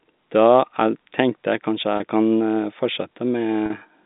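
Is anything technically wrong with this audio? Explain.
Yes. Twice, at 1.97 to 2.00 s and at 3.66 to 3.70 s, this telephone-band speech shows packet loss with pitch repetition. Audio went missing in the line's G.711 stream, about 30 ms and then 40 ms (consistent with 10 ms packets). The receiver filled each gap by repeating the last pitch period, so the speech briefly sounds held and buzzy before it resumes.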